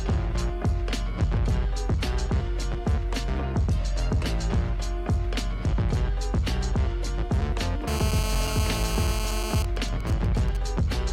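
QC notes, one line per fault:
7.88–9.60 s: GSM phone buzz. A steady, raspy buzz at about 217 Hz, dense with harmonics and unrelated to the programme, sits about 8 dB below the signal. A nearby 2G handset on a call is pulsing its transmitter 217 times a second, and the audio circuitry rectifies each radio burst into sound.
9.60–10.57 s: GSM signalling bursts. The continuous buzz breaks into even ticks with a longer buzz twice a second, roughly 15 dB down. With the talker on that call silent, the phone transmits only sparse groups of bursts, and these are rectified and heard in the same way.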